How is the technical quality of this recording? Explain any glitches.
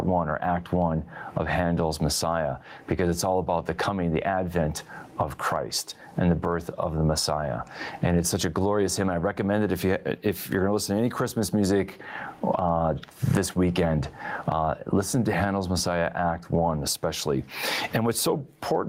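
The recording suffers from gain pumping throughout: loud and soft parts sit closer in level, squashing the speech. The likely cause is an overdriven input fighting a fast limiter, with swings of about 25 dB.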